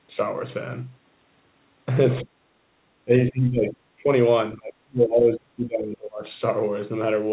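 Around 2.23, 3.05 onward… let me be precise: the speech dips sharply at 2.23, 3.05, 3.3 to 3.78, 3.99, then for a long stretch from 4.56 to 6.23, dropping by as much as about 25 dB. Likely speech suppressed in double talk, with the echo canceller ducking the talker while the far side spoke.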